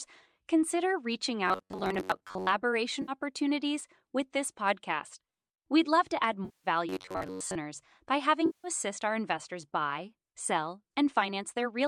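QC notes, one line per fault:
1.48 to 2.52 s and 6.89 to 7.60 s, robotic sound from repeated short buffers: a metallic buzz near 94 Hz, likely from roughly 11 ms chunks replaying in place of most of the real audio.
3.02 to 3.12 s, 6.45 to 6.68 s and 8.46 to 8.68 s, AAC frame loss with concealment: the decoder papers over gaps of 60, 190 and 180 ms, leaving a smeared patch for the short one, while the longer two decay to a faint noise floor and fade back in.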